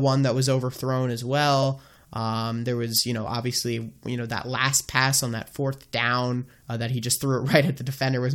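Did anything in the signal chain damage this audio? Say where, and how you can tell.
Yes, at the codec stage: a corrupt frame was decoded at 1.63 s in this speech clip. A brief burst of misplaced energy, peaking at around -15 dBFS, lasts only about a couple of frames' worth of time. Flipped bits in the compressed data gave the decoder wrong gains or codes, so it put energy at frequencies the speech never had. A lost frame would be concealed as a smoothed gap or repeat, and a sample-level click would be a single broadband tick, not energy misplaced in frequency for a frame's length.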